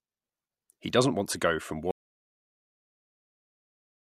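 The signal feeding the recorder was likely lost, through a disconnected input, a failed link or an accidental mute, while the recording kept writing silence. At 1.91 s, right after "want to go from", the speech cuts off mid-flow in an audio dropout to silence that runs to the end of the clip, about 2.2 s. The gap holds no room tone at all, and whatever followed is gone.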